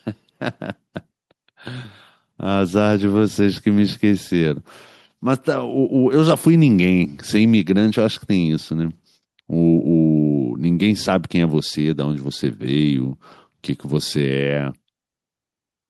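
No dropouts, clipping, glitches or other transport faults can be heard anywhere in the speech recording.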